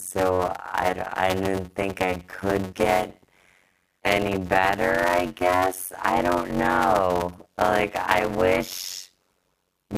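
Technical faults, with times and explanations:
Throughout, block size mismatch (padded): each block of speech is written short, which fits 256 samples, and the remainder is zero-filled, so a gap recurs at about 91.9 Hz, heard as a steady buzz, while the speech drags at 0.533 times normal speed yet keeps its timbre.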